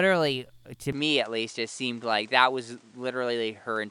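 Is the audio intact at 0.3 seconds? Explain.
Yes, at 0.3 s the speech plays through cleanly with no dropout, click, distortion or other fault to be heard.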